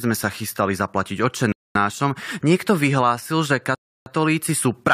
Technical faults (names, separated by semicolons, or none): rebuffering stall